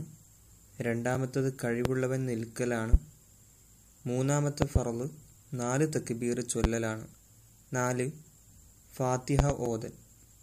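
Loud pops occur at 1.85–1.88 s, 2.93–2.96 s, 4.62–4.79 s (a double pop), 6.64–6.67 s and 9.39–9.53 s (another double), peaking roughly 20 to 25 dB above the sound. Each is likely a sudden voltage step or pulse from a switch, plug, static or driver glitch, heard as a sharp thump over the sound, which continues underneath.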